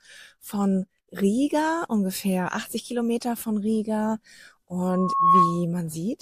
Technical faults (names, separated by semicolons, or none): loudspeaker feedback squeal